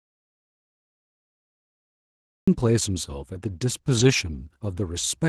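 From the very start until 2.48 s the clip sits in an audio dropout to silence, likely caused by the input being lost while the recorder kept writing silence. The waveform is a flat, silent line, and the speech then cuts in abruptly.

Between 3.99 and 4.09 s there is a lost packet rebuilt from error correction. About 60 ms of audio was reconstructed from low-bitrate copies, which fits three lost packets. There is no gap, but those moments sound rougher and noisier. The waveform stays continuous.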